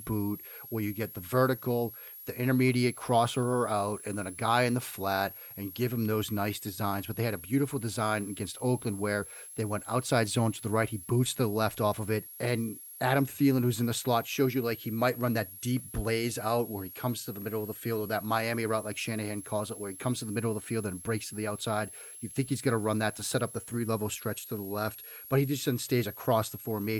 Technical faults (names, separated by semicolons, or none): switching supply whistle